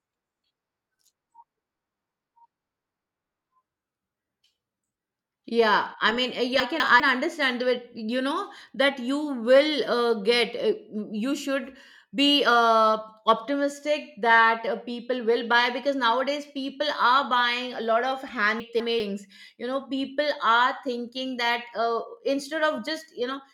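Chunks out of order twice, at 6.6 to 7.0 s just before "understand that you know" and at 18.6 to 19.0 s right after "buying a lot of". Each time two 200 ms pieces play swapped, so nothing's missing but the speech jumbles briefly across three hard joins.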